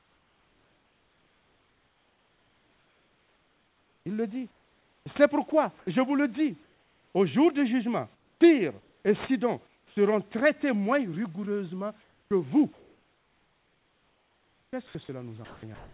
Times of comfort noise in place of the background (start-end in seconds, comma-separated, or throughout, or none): 6.63-7.15, 8.15-9.05, 9.67-9.97